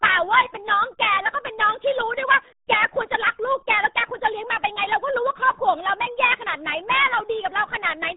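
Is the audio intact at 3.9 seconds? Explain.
No. At 3.9 seconds, like everywhere else in the clip, the speech is running through the RealAudio 14.4 codec for the whole length. It's an old dial-up-era speech coder that squeezes everything down hard, and the heavy damage here fits a stream of roughly 8 kbit/s. Nothing gets through above about 3.8 kHz, so consonants lose their edge and the speech comes out muffled and gargly, with that watery, chewed-up texture.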